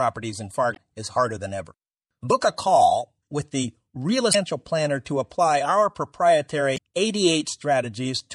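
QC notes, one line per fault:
Throughout: MP3 compression, likely at a bitrate near 64 kbps; treble cut at a fixed frequency and weak lines flickering give watery, swirly speech, seen as a flat spectrogram ceiling with patchy holes.
0.72–0.77 s, 4.31–4.35 s, 6.74–6.78 s: damaged data in a compressed stream; the decoder misreads frames and resyncs, producing brief chirps or blips, visible as short broadband smears with small waveform jumps.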